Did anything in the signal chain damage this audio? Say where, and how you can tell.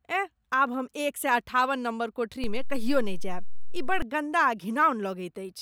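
Yes. A DC step shows up as a low thump at 2.44 s and a second thump at 4.02 s, when the offset releases, while the speech carries on unaffected between them. The waveform's zero line jumps by about -23 dBFS at the first point and holds there until the second, so the damage sits at the converter or analogue input stage, where a recalibration or an offset-carrying input being switched in shifts the baseline abruptly.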